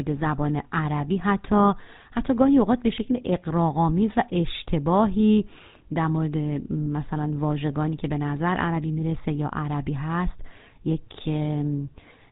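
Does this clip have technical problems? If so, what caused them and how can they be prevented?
Yes. The speech has a buzzy, gravelly roughness throughout, with the top end missing and nothing above 4 kHz. This is plainly audible GSM full-rate codec damage. The codec models the vocal tract and drives that model with regularly spaced pulses that keep only every third excitation sample, so fine detail becomes a coarse buzz. The sound fits the 13 kbps full-rate mode. To prevent it, record or transmit with a wideband codec, or keep the original recording rather than a phone-path copy.

From 6.84 to 6.87 s there is a brief rough, metallic ring. This comes from a lost GSM frame, one 20 ms frame that never arrived intact. The decoder filled the gap by repeating the settings of the last good frame, which holds the preceding sound as a short ringing smear instead of leaving silence. To prevent it, use a more reliable transmission path or stronger error protection, so that frames are not dropped.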